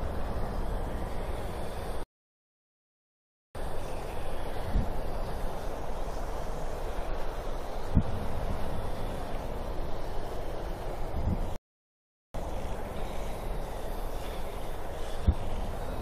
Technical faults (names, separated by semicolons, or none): rebuffering stall